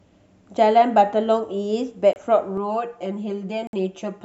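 A speech recording with two brief Bluetooth stalls, at 2.13–2.16 s and 3.67–3.73 s, silencing about 26 ms and 60 ms. The likely cause is a radio dropout; unlike an edit, the sound resumes where it stopped. From 2.57 s to the end, channel delay (comb filtering) makes the sound hollow: one channel lags by roughly 5 ms, and mono summing carves evenly spaced notches starting near 100 Hz, unlike a single EQ cut.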